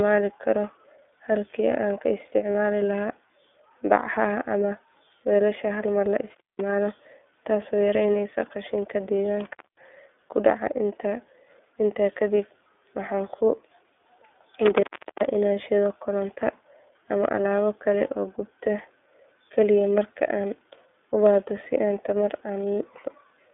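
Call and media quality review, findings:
Narrowband, slightly rough and synthetic speech throughout, nothing above 3.5 kHz or below 250 Hz. iLBC codec damage, plainly audible, consistent with the 13.33 kbps, 30 ms-frame mode.

Brief held, buzzy vowel-like smear at 2.52–2.55 s, about 30 ms. Lost iLBC frame: the decoder repeated the last pitch cycle with noise, and recovery is immediate because each frame decodes independently.

Crackle, then dropout to faint hiss at 6.34–6.61 s (open about 0.19 s), just after "hal mar la"; again at 14.66–15.35 s (open about 0.38 s), just before "inaan shiddo koronto". Intermittent contact: a loose cable or plug opening the line.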